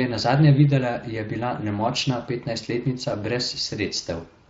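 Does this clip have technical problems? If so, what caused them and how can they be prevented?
Yes. The speech runs through the Speex codec for the whole clip, and the damage is plainly audible: the sound comes across rough and hoarse, with a noisy edge. Speex is a CELP codec. At this setting it has too few bits to rebuild the excitation behind the sound, so the texture gets coarse. The amount of damage fits a bitrate of about 20 kbps. To prevent it, use a modern codec like Opus, or give the encoder a much higher quality setting.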